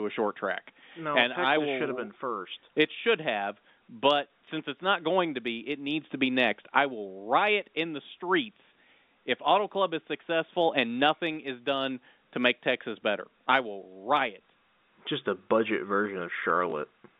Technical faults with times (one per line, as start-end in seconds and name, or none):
16.70 packet loss with last packet repeated